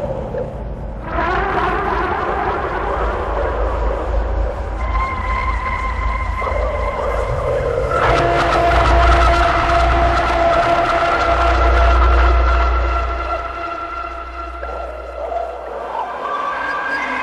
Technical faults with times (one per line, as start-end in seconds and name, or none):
2.17-2.57 frames out of order
16.51-16.92 frames out of order